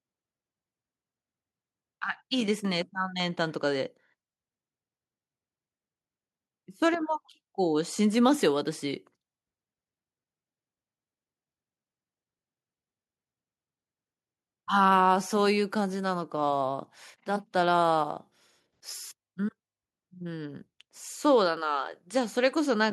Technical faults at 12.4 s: none

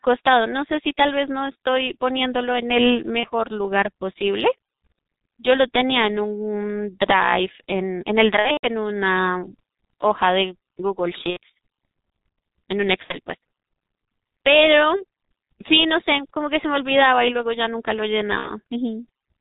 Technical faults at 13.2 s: G.723.1 codec; VoIP packet loss concealed by the speech codec

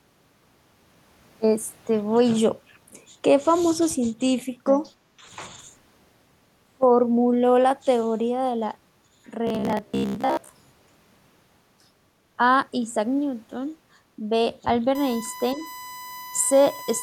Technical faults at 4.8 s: other side's voice leaking through

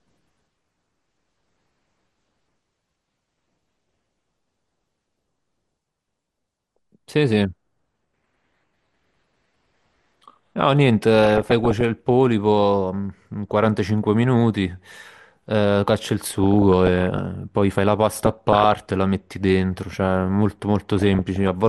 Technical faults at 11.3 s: MP2 compression; DAB burbling

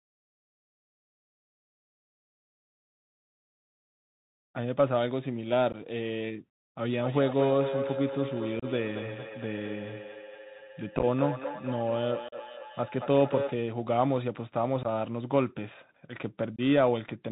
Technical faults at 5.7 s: Bluetooth CVSD headset codec; unconcealed Bluetooth headset packet loss

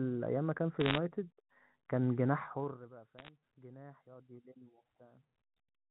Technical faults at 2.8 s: zipper noise

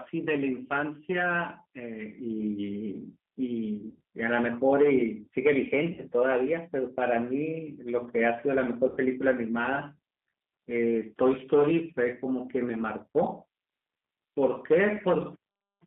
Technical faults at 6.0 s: G.729 codec; VoIP packet loss concealed by the speech codec

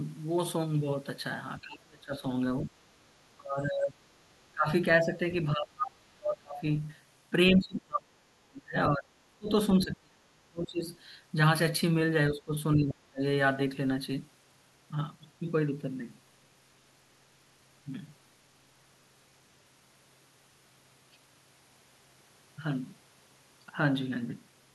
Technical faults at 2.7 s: speech suppressed in double talk

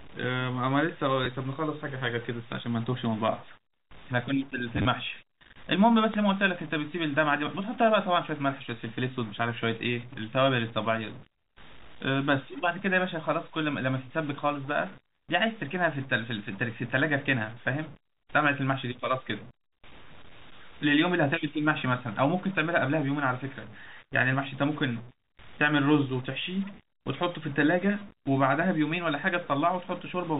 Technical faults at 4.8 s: stuck bit; packet loss with last packet repeated

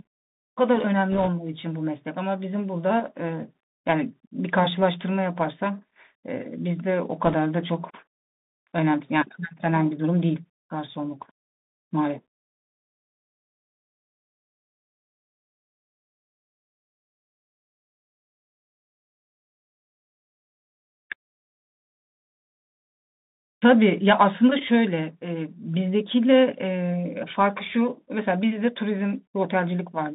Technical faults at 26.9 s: Bluetooth CVSD headset codec

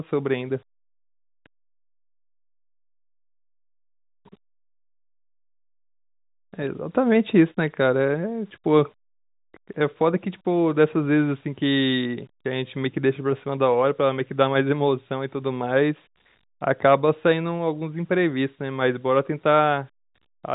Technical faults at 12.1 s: low bit depth without dither

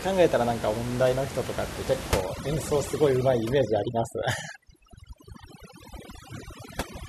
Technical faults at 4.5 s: overdone noise removal

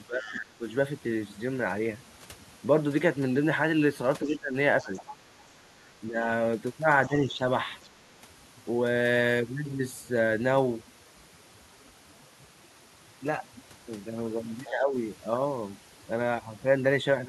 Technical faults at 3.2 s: overdone noise removal

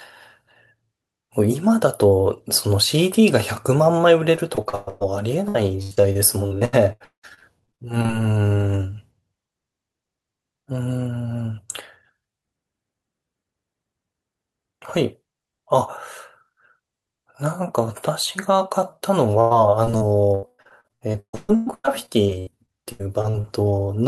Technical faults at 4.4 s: repeated packet loss (robotic sound)

